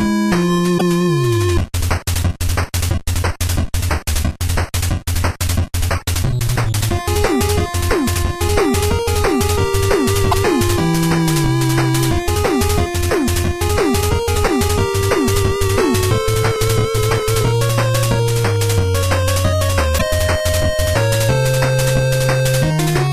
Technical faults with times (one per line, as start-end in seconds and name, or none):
0.75-0.82 damaged data in a compressed stream
10.28-10.34 damaged data in a compressed stream
19.95-20.02 damaged data in a compressed stream